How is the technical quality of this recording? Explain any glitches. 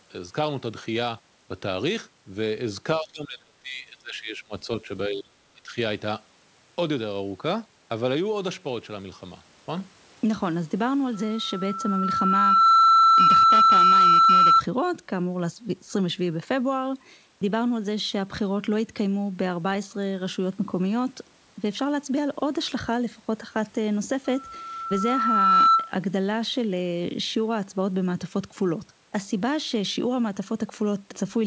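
The speech has two recurring faults: repeated dropouts early on and two feedback squeals later. The audio stops at 8 kHz, which fits a wideband call codec such as G.722.

Speech suppressed in double talk, 2.99–4.69 s, 5.08–5.35 s and 5.53–5.77 s: the speech dips by up to about 25 dB in chunks. The likely cause is an echo canceller muting the talker while the far end spoke.

Loudspeaker feedback squeal, 11.14–14.62 s and 24.25–25.94 s: a 1.3 kHz tone swells over about a second and a half to roughly 10 dB above the speech. The microphone is re-amplifying its own loudspeaker at that frequency.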